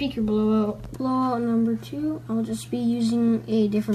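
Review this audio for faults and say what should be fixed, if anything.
Nothing stood out on listening, so there is nothing here that needs fixing.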